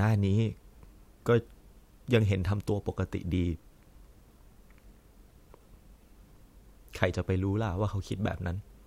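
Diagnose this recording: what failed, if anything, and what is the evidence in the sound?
Nothing failed, and there is no evidence of a fault anywhere in the sound of this recording.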